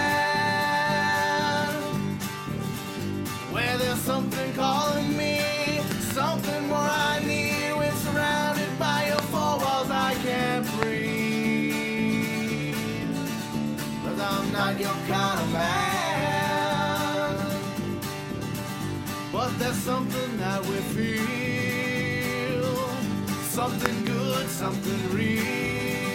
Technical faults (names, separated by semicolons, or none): loud pop